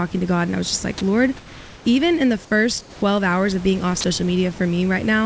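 From 1.37 to 1.85 s, just before "even in the", comfort noise takes the place of the background. For 480 ms the room's textured hiss turns flat and featureless, about 3 dB quieter. The likely cause is discontinuous transmission: the sender paused, and the receiver synthesised noise.

Between "even in the" and "hours of being off", from 2.81 to 3.02 s, sound is dropped by the voice detector. It likely judged part of the sound to be background. About 100 ms of speech is lost to steady noise. A second drop follows "hours of being off" at 4.01 to 4.04 s, cutting 30 ms. Through the G.722 call path, nothing is heard above 8 kHz.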